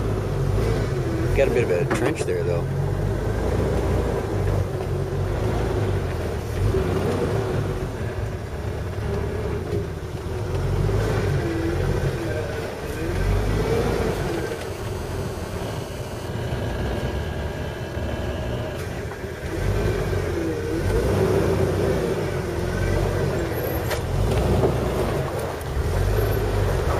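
A hard, raspy buzz at 217 Hz, thick with harmonics, cuts in from 14.10 to 16.28 s, steady throughout and about 19 dB below the audio. This is GSM phone buzz: a nearby 2G handset on a call transmitting in bursts, which the audio circuitry rectifies.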